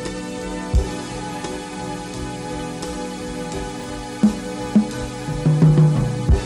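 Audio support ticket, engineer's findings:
Chunks out of order around 3.80–3.84 s: brief jumbled blip. One 20 ms chunk landed a slot late and played after its neighbour, so nothing is missing but there are three hard joins. Looks like a reordering slip in the buffering/write path.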